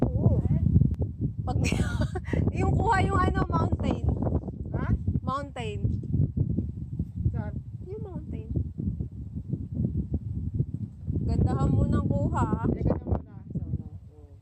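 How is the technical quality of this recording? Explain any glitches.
The recording has one clear fault. From 0.94 s to the end, the level drops abruptly by about 6 dB and stays down. The likely cause is one channel dropping out, halving what reaches the mono sum and removing anything carried only on that side.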